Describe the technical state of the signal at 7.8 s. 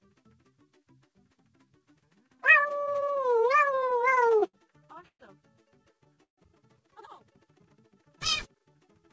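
At 7.8 s the signal is intact, with no dropout, glitch or distortion, only the call path's wideband coding that leaves nothing above 8 kHz.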